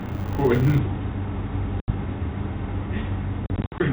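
From the start to 0.8 s a steady 100 Hz buzz rides on the speech, rising and falling with its level. This is a filter restarted on every block. The filter drops its memory at each block boundary and begins again from silence, so every block opens with a small transient. Repeating 100 times a second, those ticks fuse into a buzz, which points to blocks of about 10 ms.

At 1.8 s the audio cuts to a hard-edged silence of about 80 ms, from packet loss on an ADPCM call. A few packets went missing and were filled with silence. The decoder's adaptive predictor and step size then no longer matched the sender's, so the speech re-enters slightly distorted before settling by 1.9 s. The same fault returns from 3.46 to 3.87 s, now as several gaps totalling about 160 ms scattered over 340 ms, the longest about 60 ms, each followed by a rough re-entry. The whole clip is band-limited to 4 kHz with light ADPCM graininess, which fits G.726 at 32 kbit/s.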